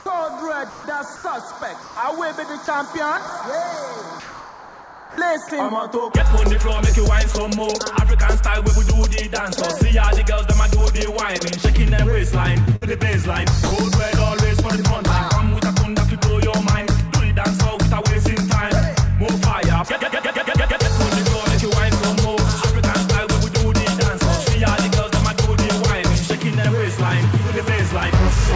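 From 0.70 to 0.84 s, 1.16 to 1.24 s, 1.82 to 1.96 s and 4.20 to 5.18 s, the background is replaced by comfort noise. The sender likely stopped transmitting in these pauses, and the receiver filled them with synthetic noise. The real background sits about 22 to 23 dB below the loud passages. The substitute is smoother and quieter, by about 2, 2, 1 and 4 dB respectively, with the longest patch lasting 980 ms. On a spectrogram, each patch shows as a uniform, textureless band, slightly dimmer than the surrounding background.

At 5.14 to 5.18 s, the sound returning after that long pause has its onset clipped by the voice detector. The detector was likely slow to register the restart, so the first 40 ms were never sent and comfort noise plays in their place. The sound therefore begins abruptly, without its soft rise. In the waveform, the envelope jumps straight from low noise to full amplitude rather than ramping up.

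Between 12.66 and 12.83 s, the sound is chopped by the voice detector. Transmission likely switched off and on more than once, so 67 ms in total are replaced by fill, leaving more than one short hole. A spectrogram shows the energy broken by narrow gaps of flat noise.

From 13.63 to 13.71 s, the sound is dropped by the voice detector. The detector likely treated 80 ms of it as background and stopped sending, so steady comfort noise stands in until sending resumes. The waveform shows a brief flat, noise-only stretch cut into the sound, with no harmonic structure on the spectrogram.

Throughout the clip, the spectrogram is empty above 8 kHz, which fits the G.722 wideband codec at 64 kbps on this call path.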